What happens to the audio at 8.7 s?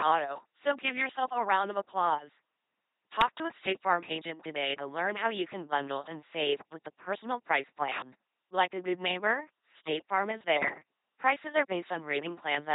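At 8.7 s the speech carries the same LPC-10 vocoder damage heard across the entire clip. Each short frame is rebuilt by a ten-pole vocal tract filter excited by either a pulse train or noise, with no mixture between them. The result is a heavily degraded, buzzing robotic voice, with stray buzz or hiss where the voicing choice is wrong, and nothing above 3.9 kHz. This fits a 2.4 kbit/s vocoder.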